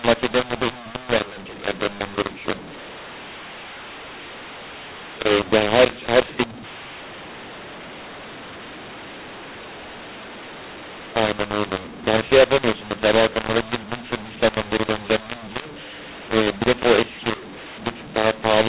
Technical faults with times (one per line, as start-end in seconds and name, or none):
0.00-18.69 mu-law and A-law mixed up